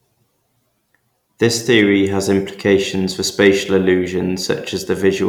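From 1.44 to 1.81 s, just before "has implications for", the speech drives a stage about 1 dB past its limit, so hard clipping shaves the peaks flat. That slight overload adds brief, high harmonics, heard as crackle on the loudest moments.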